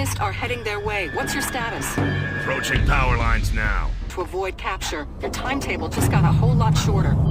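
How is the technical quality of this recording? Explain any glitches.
The recording has one glitch, a stream segment skipped at about 4.09 s. At that point the sound jumps abruptly forward with a brief blip, as if a stretch of the material had been cut out and the two sides butted together. The likely cause is a segmented stream where one chunk failed to arrive and the player moved straight on to the next one, dropping that portion of the programme rather than pausing to wait for it.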